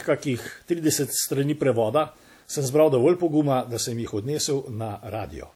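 Throughout, grainy distortion tracks the speech level, likely low bit depth without dither (about 9 bits). The waveform shows stair-steps, and the spectrogram shows signal-following haze roughly 40 dB down.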